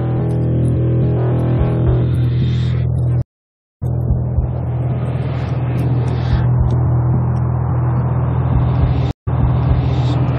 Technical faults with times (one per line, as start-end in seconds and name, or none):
3.22-3.83 stream reconnect
9.11-9.99 stream reconnect